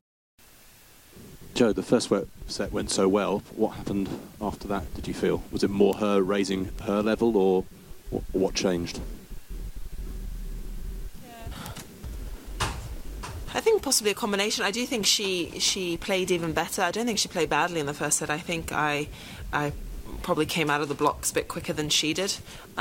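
Bit error spikes tick at 5.93, 6.79, 11.66 and 21.38 s: flipped bits throw samples to about -10 dBFS (about -22 dBFS at 6.79 s), showing as lone waveform needles and thin full-height spectrogram lines.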